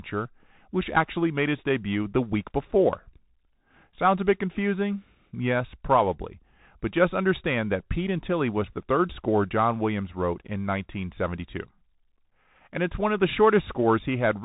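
From start to finish the speech has passed through a Bluetooth CVSD headset codec, the narrowband link used by hands-free headsets, and its damage is plainly audible. The encoder sends only one bit per sample, saying whether the signal should step up or down, which fits a 64 kbps stream. Everything above about 4 kHz is gone, leaving a muffled telephone tone. Where loud high sounds outrun the adaptive step they distort, s sounds come out scratchy, and a granular hiss sits under the speech throughout.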